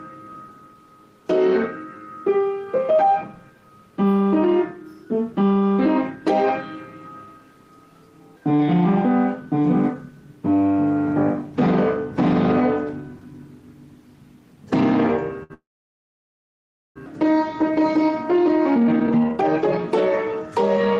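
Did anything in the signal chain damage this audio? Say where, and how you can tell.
Yes. A short stall from a late packet appears at 15.43 s. The network jitter buffer ran dry, so the sound is held for 64 ms.

A call audio freeze follows from 15.54 to 16.98 s. The held sound fades into about 1.3 s of silence. Delayed network packets are the likely cause.

Jitter buffer speed-up runs from 18.02 to 19.79 s at 157%, and from 20.32 to 20.95 s at 105%. Pitch stays steady while short pieces are cut.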